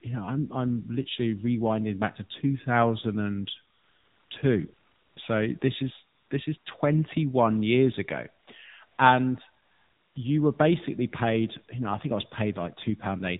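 The whole clip runs through an AMR narrowband mobile codec. Nothing above 4 kHz survives, and the speech sounds buzzy and synthetic, which fits a low AMR-NB rate around 7.4 kbps. AMR comfort noise fills the pauses at 3.74–4.30, 4.74–5.16, 5.60, 6.16–6.30, 6.58–6.66, 8.44–8.48, 8.86–8.98 and 9.64–10.16 s. Speech frames stopped, and a smooth synthetic hiss switches in and out in place of the real background.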